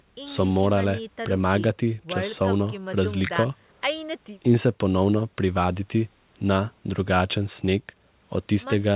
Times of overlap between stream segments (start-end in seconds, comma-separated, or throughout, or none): none